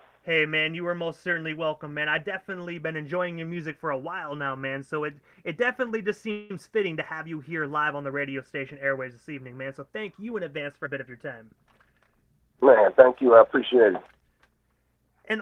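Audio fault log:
6.31–6.51 s, call audio freeze: the sound stops advancing and the last moment carries on as a fading buzz for about 187 ms before resuming exactly where it left off. Packets were likely held up in transit, emptying the jitter buffer. Nothing is lost, but the stream now runs that much later.
10.84–11.12 s and 13.22–13.92 s, jitter buffer speed-up: the audio runs at 117% and then 107% speed with unchanged pitch, sounding briefly hurried. The receiver had a surplus of buffered audio and trimmed roughly 50 ms each time, cutting out pitch-period-sized pieces repeatedly to reduce delay.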